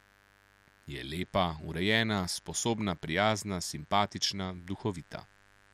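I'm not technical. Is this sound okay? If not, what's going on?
No. A mains buzz runs under the speech for the whole clip, from the first moment to the last. Electrical interference from the 50 Hz power supply, the kind a light dimmer or a poorly shielded cable lets in, leaks into the recording as a steady, raspy buzz, fairly quiet beneath the speech. A plain mains hum is a smooth, low drone. This buzz sounds gritty and edged because the interference carries many higher tones stacked above that low pitch.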